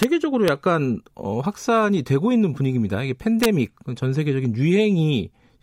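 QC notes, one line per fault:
0.03 s: integer overflow. A loud peak in the speech pushed the sample value past the largest integer, about 1 dB over, and it wrapped to the opposite sign instead of being held at the limit. The waveform jumps across the full range in one step. That is why it cracks so sharply, harsher than clipping.
0.48 s: integer overflow. The same fault, again about 1 dB over. A single sample flips sign and gives a brief, hard tick.
3.43 to 3.46 s: integer overflow. This peak goes about 2 dB over the limit and lasts about 22 ms. Each sample beyond the ceiling wraps to the other extreme, so the crack here is longer than the earlier two.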